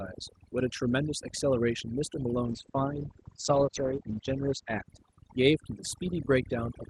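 From the very start the pauses are sunk into near silence that sparkles with twinkling specks. That is overdone noise removal running throughout the clip. A noise reduction stage set far too aggressively is pushing individual frequency bands down to almost nothing whenever they come close to its idea of the noise floor, so the softer parts of the voice are removed along with the noise.

At 2.44 s the sound coarsens and turns rougher and more muffled, as if a layer of brightness has been lifted off. It stays that way until about 5.61 s, and it is at its worst for roughly 1.9 s within that span. This is a call bitrate drop. The call's bandwidth estimate fell, so the Opus encoder on the call path was told to spend far fewer bits, and the sound points to a fall from about 32 kbps to about 11 kbps. At that lower rate the codec quantises more crudely and narrows its audio band, cutting everything above 8 kHz where it had reached 12 kHz. 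That lost top end is the muffling, and the sound stays coarse until the bitrate recovers.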